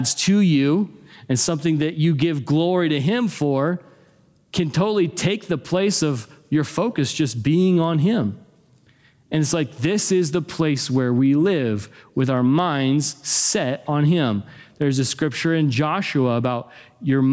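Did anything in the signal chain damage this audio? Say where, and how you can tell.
Yes. Throughout the speech, the gain swings by around 10 dB, pulled down under each loud syllable, leaving the level squashed and breathing. This is gain pumping, likely from input gain set far too high, with a fast limiter or compressor clamping each peak.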